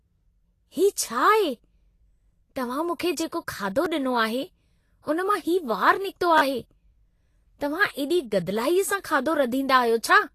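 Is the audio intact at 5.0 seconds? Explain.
No. Pre-echo runs from 5.02 to 5.07 s, a smear of about 49 ms just before "उन मां हीउ वारु". The transform codec spreads its quantisation noise across the whole block, so noise meant to be masked by the sharp onset also fills the quieter stretch ahead of it. The result is a brief hiss that arrives before the attack, and the onset itself sounds softened and smeared rather than crisp.

Vorbis compression is also plainly audible at this moment, as it is across the whole clip. The treble is grainy and hissy, and nothing is present above 14.2 kHz. That cut-off and the graininess fit a low bitrate of around 33 kbps, which is the likely cause. At that rate, fine high-frequency detail is quantised so coarsely that it turns into noise of similar energy, which roughens tonal parts and blurs the edges of attacks.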